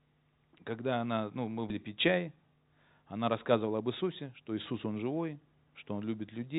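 Speech heard through a narrowband call path, with nothing above 4 kHz, consistent with G.711 mu-law. At 1.70 s, just after "когда она ну мы", a skip ahead drops roughly 0.4 s and joins the two sides with no silence, unlike a dropout, which leaves a gap. From 3.63 to 5.06 s a jitter buffer speed-up runs the speech about 109% fast at unchanged pitch, cutting around 0.15 s. Simple resampling would raise the pitch instead.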